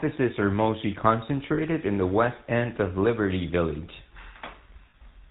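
From start to finish the speech carries the buzzy, gravelly roughness of the GSM full-rate codec, with no content above 4 kHz, consistent with 13 kbps GSM. The vocal tract is modelled and excited by sparse regular pulses, so the grit follows the voicing rather than sitting as steady background hiss.

Lost GSM frames occur at 1.54 to 1.61 s, between "are mostly" and "in the west end", and again at 4.90 to 4.95 s. Each gap of about 40 ms, which fits two lost frames, is filled by repeating the last good frame. It is heard as a brief metallic ring that holds the previous sound, not as a silent dropout or a click.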